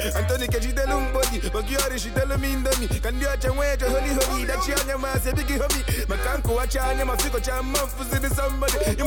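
No technical faults can be heard anywhere in the clip. Nothing in the sound points to a problem in how it was captured, processed or delivered.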